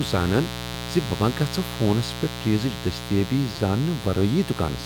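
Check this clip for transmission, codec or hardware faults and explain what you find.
Two faults are present in the speech: a continuous mains buzz and a repeated buffer that occurs twice.

The mains buzz runs through the whole clip, around 10 dB below the speech. Switching spikes at twice the 60 Hz line frequency leak into the signal and give it a steady, raspy edge. On a spectrogram it appears as evenly spaced horizontal lines at multiples of 60 Hz, reaching into the kilohertz range.

The repeated buffer is heard at 0.74 s, just before "ز بہٕ ما", and at 3.56 s, just after "پیٹھ چیزٕچ دستیٲبی". Each time, new audio arrived late and a 5.8 ms block was played again, which fits a 256-sample buffer. It repeats once at 0.74 s and three times at 3.56 s. The result is a brief click or buzzy stutter. The waveform shows identical short segments joined by hard discontinuities, and the spectrogram shows thin vertical streaks.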